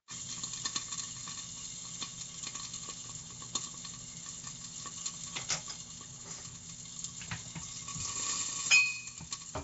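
A recording of sounds carries Nellymoser-style compression damage from start to finish, most likely from Flash's Nellymoser Asao codec. Nothing is present above 7.7 kHz, and the sound has a rough, hissy halo with a smeared, watery texture, consistent with a bitrate near 32 kbps. Quiet bands starved of bits are replaced by noise. On a spectrogram this shows as a hard ceiling at 7.7 kHz and grainy, speckled noise patches filling the gaps between stronger components.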